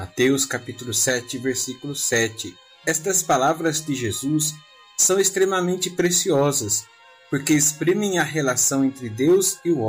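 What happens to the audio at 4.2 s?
Nothing goes wrong at 4.2 s: the audio plays through that moment intact, with no dropout, click or other fault.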